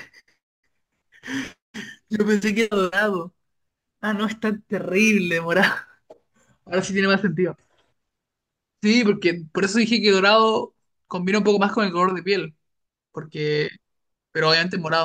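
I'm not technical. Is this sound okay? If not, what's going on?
No. From the start until about 6.65 s, the speech has a gritty, fizzy buzz riding on it. This is crude rate conversion. The audio's speed setting was changed by simply dropping samples, likely 48 kHz to 44.1 kHz, without smoothing, leaving a grainy haze.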